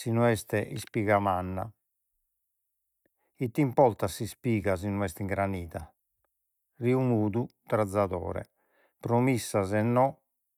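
No technical faults are audible anywhere in the recording, so there is nothing to flag.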